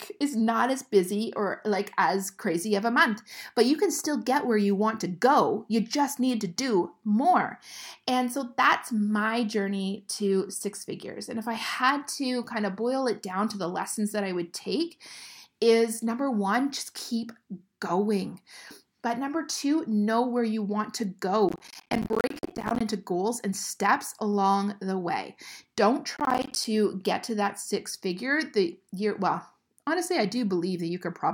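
Speech clip with two bursts of processor overload crackle, from 21.49 to 22.81 s (after "where you want to", before "into goals and steps") and from 26.17 to 26.65 s (before "get to that six"). Missed deadlines on roughly 10 ms buffers drop short slices to silence. This shows as dense hard-edged waveform gaps and vertical broadband streaks on a spectrogram.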